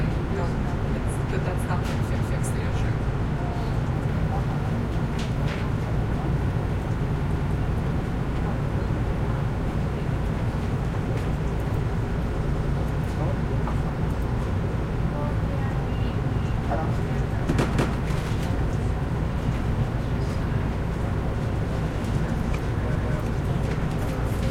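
Overlapping chunks at 2.15, 7.35, 12.55, 17.75 and 22.95 s: the sound arrives in 5 s chunks that each restart 200 ms early, so that stretch repeats at every join as a regular stutter.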